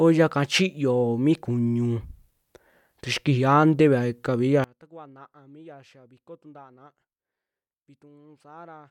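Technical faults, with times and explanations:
4.64–8.91 s, one channel inverted: from 4.64 s to the end, the speech and background drop by about 28 dB, leaving a faint residue. The likely cause is one stereo channel flipping polarity, so the content common to left and right cancels when the two are summed to mono, and only the small difference between the channels survives. The near-identical channels explain why so little remains.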